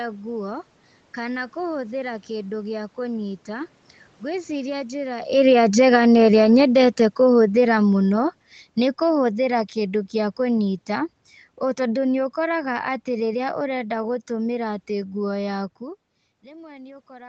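At 5.29 s, just after "ngwĩciria njĩra", automatic gain falling sets in. The gain control judges the input too loud or its background noise too strong and pulls its level down over about half a second, to 5.76 s, by about 4 dB. A second, longer fall runs from 6.29 s to 10.83 s, lowering the level by about 8 dB. The speech sinks gradually, and the room noise sinks with it, which marks this as a gain change rather than the talker moving.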